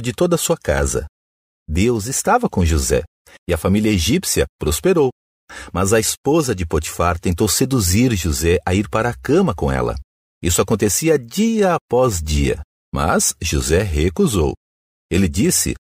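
Sample clock jitter runs throughout this speech clip: an unstable converter clock of around a microsecond or two mistimes samples, adding hiss roughly 35 dB down that swells on loud, bright syllables.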